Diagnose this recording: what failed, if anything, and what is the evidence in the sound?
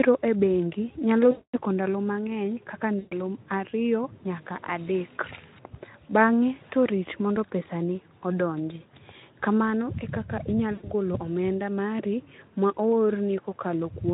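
VoIP packet loss concealed by the speech codec, a network-stage fault, at 1.32–1.57 s, 2.99–3.17 s and 10.73–10.90 s. The Speex decoder bridges each gap by extending its last pitch and filter with falling gain, so speech smears into a fading buzz or coloured noise and stays weak just after packets return.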